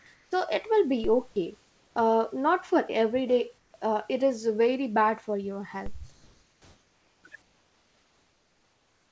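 Comfort noise in place of the background first appears at 0.14 to 0.32 s. The room tone under this speech gives way to a flat, featureless hiss about 14 dB quieter. This is likely discontinuous transmission: the sender went silent during the pause, and the receiver synthesised noise shaped only roughly like the real background.

Overlapping that gap, from 0.26 to 0.32 s, is an onset clipped by the voice detector. About 60 ms of the opening sound is missing, so it begins abruptly without its soft attack. This is likely because the detector was late to register that sound had resumed, and those first moments were never sent.

A DC step at 1.04 s is heard as a low thump. The waveform's zero line jumps and then drifts back slowly, as a roughly 2 Hz high-pass would pull it, while the speech carries on unaffected.

The comfort-noise fill returns at 1.60 to 1.96 s, just before "uh not for every", about 6 dB down. 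It recurs at 3.58 to 3.74 s, between "not for every day" and "uh it is very", about 5 dB down.

A second DC step lands at 5.86 s, right after "very bad for your", with the same thump and slow recovery.

Longer stretches of synthetic noise replace the background from 6.12 to 7.24 s, about 2 dB quieter, and from 7.42 s to the end, about 4 dB quieter. The call path's band limit is audible as nothing above 8 kHz, which fits a wideband codec such as G.722.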